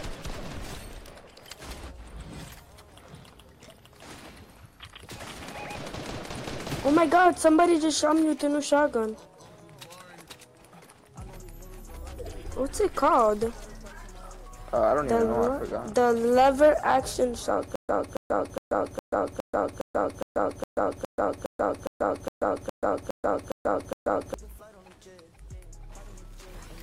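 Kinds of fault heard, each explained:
Stutter with silent gaps: a 278 ms fragment replays 16 times, each followed by 134 ms of digital silence, likely from a stalled stream retrying.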